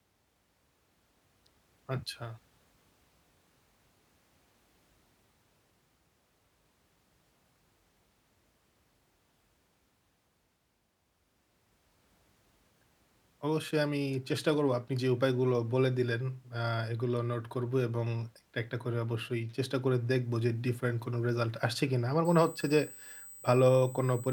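It's a speech recording, and near the very end, from about 22.25 s to 24.32 s, a USB whine creeps in: a steady, fixed-pitch tone based on 8 kHz, with its strongest component up at 16 kHz, sitting roughly 20 dB under the speech. That 8 kHz spacing matches the 125-microsecond microframe rhythm of a USB bus, whose current draw is leaking into the audio through the power or ground.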